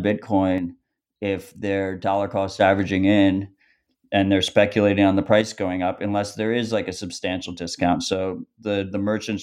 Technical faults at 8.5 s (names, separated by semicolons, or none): one channel drops out